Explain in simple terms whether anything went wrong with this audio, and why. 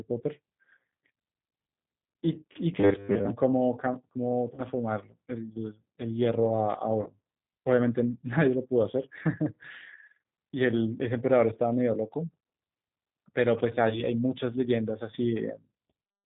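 The call used the G.729 codec, phone-grade compression that rebuilds speech from a simple model and drops everything above 4 kHz, so it sounds narrow, rough and slightly synthetic.

VoIP packet loss concealed by the speech codec occurs at 4.54–4.61 s, 7.02–7.09 s and 13.89–14.02 s. Short chunks went missing and the decoder guessed to fill each gap, leaving a brief, fading smear.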